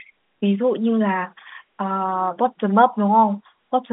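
No faults are present in the speech; the G.711 telephone coding passes the expected 200 Hz to 3.6 kHz line band.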